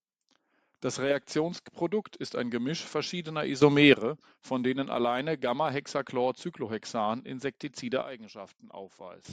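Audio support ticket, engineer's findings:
Sudden gain jump, 3.62–3.94 s: speech and noise floor step up together by about 11 dB, then drop back just before "von denen alleine". Waveform shows a square-edged block of raised amplitude; spectrogram brightens uniformly across all bands. Likely a gain setting applied without a ramp.

Sudden gain jump, 8.02–9.25 s: likely same mechanism inverted. Level and noise fall about 11 dB at once; waveform shrinks abruptly, spectrogram darkens evenly with hard vertical edges.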